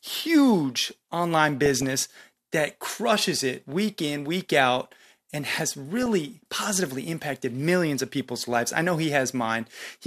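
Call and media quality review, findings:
DAB burbling in speech, 1.66–1.94 s after "huge online" and 5.96–6.06 s after "week out and has." Short noise blips over the speech. Probable weak DAB reception: residual bit errors slip past error correction into MP2 data, so corrupted samples put short noise blips in single sub-bands and corrupted scale factors make sub-bands jump in level for up to a frame.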